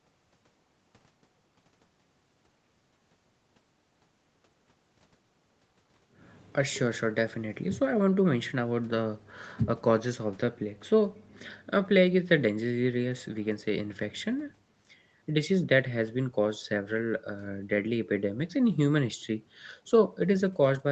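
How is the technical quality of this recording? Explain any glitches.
Nothing glitchy turns up here: the speech arrives sounding like a normal call, with the lowest bass trimmed and nothing above 8 kHz, which is simply how the call processing and codec shape the sound rather than anything going wrong.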